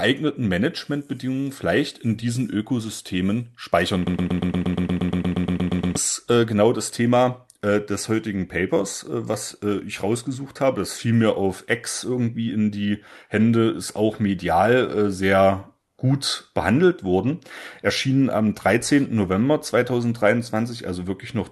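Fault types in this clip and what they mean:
Broken-record loop: from 4.07 s to 5.96 s, a fragment of about 0.12 s repeats back to back, roughly 16 times, producing a rapid stutter until normal playback resumes just before "äh genau das". The exact repetition most likely means a player, encoder or stream stalled and kept re-sending its last held fragment, so the audio that belonged to those two seconds is gone, beneath a call-codec band limit near 12 kHz.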